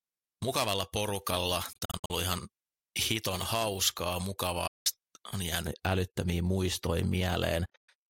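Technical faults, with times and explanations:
0.00–5.67 s, pre-emphasis left on: the audio sounds thin, bright and hissy on sibilants, with the top end about 11 dB hotter at 10 kHz than at 1 kHz. A treble boost, consistent with a J.17 curve, was never followed by its matching de-emphasis, until 5.67 s.
1.73–2.10 s, 4.67–4.86 s, 7.66–7.89 s, Bluetooth dropout: the sound cuts to silence, then resumes further along, as though it kept playing. The first is broken gaps totalling about 0.22 s with the longest 61 ms. The second is one 0.18 s hole. The third totals 0.18 s with a 0.12 s longest gap. The likely cause is packets reaching the headphones too late and being dropped.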